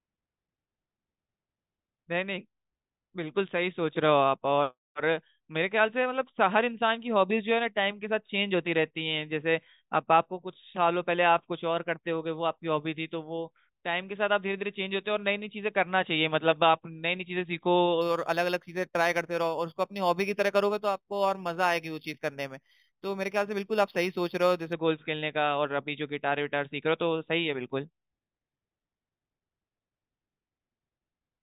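Imaging from linear upsampling runs from 18.01 to 24.73 s. The speech was brought up to a higher rate by joining successive samples with straight lines, and the pattern points to 8 kHz material raised to 48 kHz. That crude interpolation dulls the top of the original band and leaves a mirrored copy of the spectrum between 4 kHz and 8 kHz, sitting around 20 dB below the signal. It comes across as a faint metallic shimmer clinging to sibilants.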